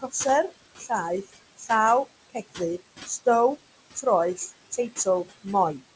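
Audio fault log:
Throughout: noise suppressor artifacts. Background noise is pushed down by about 21 dB between phrases and rises under speech, frame by frame.
0.78–0.91 s, 1.22–1.36 s, 1.57–1.70 s: speech cut by the noise suppressor. Quiet speech is mistaken for noise and dips by about 14, 15 and 18 dB, sounding briefly swallowed.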